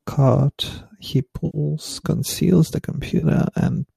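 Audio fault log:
1.46 to 1.58 s and 3.20 to 3.25 s, AAC frame loss with concealment. Two short gaps in the stream are patched over. The first follows "cart he" and ends before "conceals the". About 80 ms is missing there, which fits eight 10 ms frames. The second follows "conceals the" and is about 30 ms. The decoder rebuilds each gap from the last good spectrum, so the speech turns briefly smeared and noisy. The short frames of low-delay AAC compression, likely AAC-ELD near 64 kbps, fit these frame sizes.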